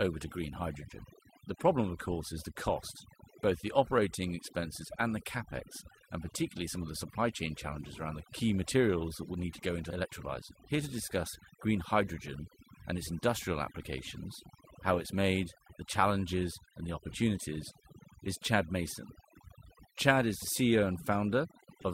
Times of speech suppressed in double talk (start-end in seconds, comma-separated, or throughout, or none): none